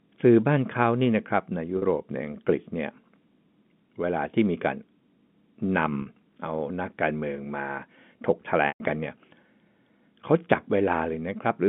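At 1.78 s and again at 6.02 s there's packet loss with pitch repetition: about 40 ms of speech goes missing each time, which fits two 20 ms packets, and the receiver fills it by looping the last pitch period, so you hear a brief held, buzzy note. The bigger one at 8.68 s runs about 120 ms, so the repeated cycle fades out to silence before the speech cross-fades back in. It's all over a narrow G.711 phone band of 150 Hz to 3.5 kHz.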